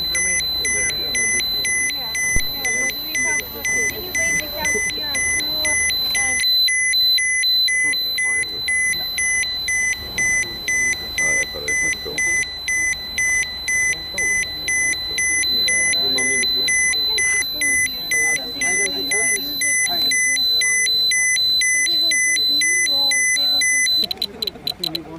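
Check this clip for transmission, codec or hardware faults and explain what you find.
One hardware fault stands out. A phantom power thump at 2.36 to 2.55 s: switching a supply on a live input sends a voltage step through the coupling capacitors, heard as a deep low thud peaking at about -8 dBFS and dying away within roughly 42 ms.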